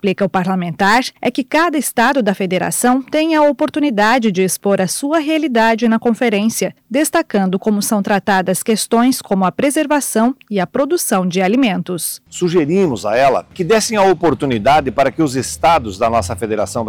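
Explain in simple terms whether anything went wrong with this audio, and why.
Something went wrong for the whole clip: hard clipping. The sound was pushed far louder than the recording stage could handle. So the tops of the loudest moments got sliced off flat. Only a small share of the sound is cut, but each loud peak turns harsh and fuzzy.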